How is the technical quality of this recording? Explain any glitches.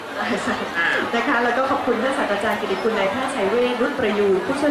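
No technical glitches are audible.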